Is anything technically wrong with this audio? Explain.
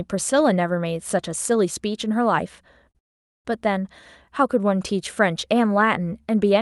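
Yes, the speech has two timing faults close together.

From 2.91 to 2.97 s there is a short stall from a late packet. A packet missed its slot, the jitter buffer emptied, and the receiver stretched the last sound by about 35 ms, leaving a held syllable with a slight buzz or dip and nothing lost.

From 2.99 to 3.47 s there is a call audio freeze, likely from packets held up in transit. The buffer ran dry and 460 ms of silence was inserted before the speech resumed from where it stopped, so nothing is missing but the timing is pushed later.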